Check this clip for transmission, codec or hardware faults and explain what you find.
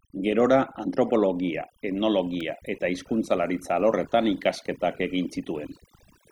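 Two faults are present in this speech clip: overdone noise removal throughout, and an electrical switching spike at 2.40 s.

Overdone noise removal: throughout, a noise reducer set far too aggressively mutes frequency bands near its noise estimate, taking quiet parts of the voice with them and leaving a lowered background with twinkling specks.

Electrical switching spike: at 2.40 s a sharp snap or tight cluster of clicks sits on top of the speech, likely a nearby switch or static discharge arcing into the audio line.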